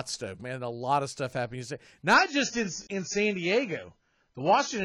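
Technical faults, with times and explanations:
2.14–4.84 s, adaptive stream at a lower bitrate: the speech abruptly turns dull and smeared, with nothing above 7 kHz and swirly codec artefacts, but no gap. The player switched to a lower-bitrate rendition, and the sound fits a drop to around 16 kbit/s.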